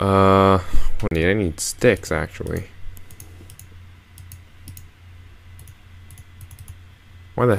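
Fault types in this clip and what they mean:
CD skip: at 1.08 to 1.11 s the playback drops out for a brief mute of around 30 ms, heard as a short tick, then resumes from a different point, as when the laser is knocked onto another turn of the disc's spiral track.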